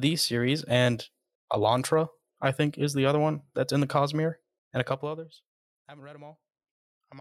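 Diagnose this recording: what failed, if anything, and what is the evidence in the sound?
Zipper noise from a buffer-stepped gain change, 4.81 to 5.49 s, just before "I haven't read". The speech drops about 25 dB in roughly a hundred unsmoothed steps a second, so each jump clicks and the fade comes out as a ticking zip.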